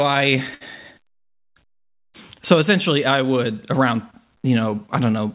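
At 0.54 s, a sound in the speech hangs on slightly too long, held for about 65 ms until 0.63 s, with a faint buzzy, flattened quality before the speech picks up exactly where it left off. This is a short stall from a late packet: the jitter buffer ran dry, so the receiver stretched the last audio to fill the gap. Nothing is lost, but everything after arrives about 65 ms later, over a narrowband call path with nothing above 4 kHz.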